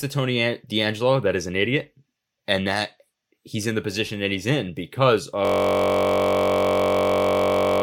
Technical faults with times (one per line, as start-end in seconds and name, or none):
5.45-7.82 system hang loop